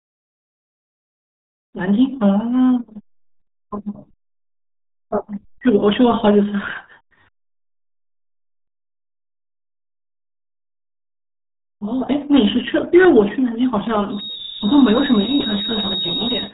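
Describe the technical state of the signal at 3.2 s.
At 3.2 s, as across the whole clip, the speech passes through the RealAudio 14.4 codec, and the heavy coding damage fits an 8 kbit/s dial-up rate. Nothing above 3.9 kHz survives, leaving the speech muffled, gargly and thin on consonant detail.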